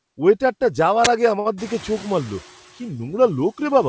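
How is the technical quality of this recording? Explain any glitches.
The recording has three distinct glitches, all within about a second of each other in the speech, plus a bandwidth ceiling at 8 kHz that comes from the call path.

From 1.05 to 1.07 s there is an uninitialised buffer: a sharp, loud burst of digital noise lasting about 21 ms. The playback side sent out a block before any audio had been written into it, so whatever values were sitting in that memory were played as samples. The length of the burst fits a 1024-sample buffer being played in its raw state.

From 1.40 to 1.47 s there is a short stall from a late packet. A sound is held about 53 ms too long, with a slight buzz or dip. The packet arrived late and the jitter buffer emptied, so the receiver stretched the last audio to cover the gap. Playback then resumed at the point where it stopped, so nothing is lost, but everything after it plays about 53 ms later.

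From 1.57 to 2.54 s the noise suppressor is catching up. The room noise rises by about 20 dB at roughly 1.5 s. After the rise it sits roughly 24 dB below the speech. At first it passes through with little reduction, then it gradually sinks as the suppressor's noise estimate adjusts over nearly a second. The final reduction is about 6 dB.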